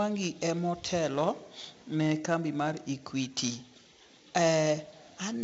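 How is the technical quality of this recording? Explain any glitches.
The recording is heavily degraded by 4-bit ADPCM compression throughout. Each sample is coded as a coarse 4-bit step from a prediction, so gritty hiss rides on louder speech, attacks distort, and nothing sits above 7.8 kHz, which fits a 64 kbps stream.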